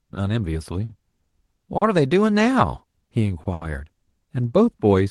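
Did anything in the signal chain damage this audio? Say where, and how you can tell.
Yes. The network stage caused four short stalls from late packets. Each time, the jitter buffer ran empty at 0.85, 1.77, 3.43 and 3.53 s, and the receiver stretched the last sound for 40, 40, 20 and 80 ms before resuming. Nothing is lost, but the speech briefly drags.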